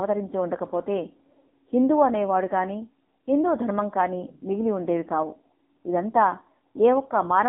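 Throughout, AMR narrowband mobile codec: a sparse-pulse vocal model leaves buzzy, synthetic speech in a 200 Hz–3.7 kHz band, consistent with 6.7 kbps. Spectrograms show a hard ceiling near 3.8 kHz.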